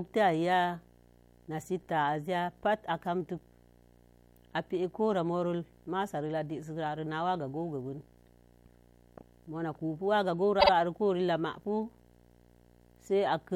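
From the start and through the whole speech clip runs a video or display buzz: a 60 Hz field-rate buzz with hash above it, sitting around 30 dB below the speech, as a screen or video cable couples its interference into the audio path.

At 10.59 s to 10.70 s comes a stutter from repeated frames. The same 52.2 ms stretch of compressed audio plays twice more, which fits a two-frame block being written or sent again, and the clip runs 104.5 ms longer.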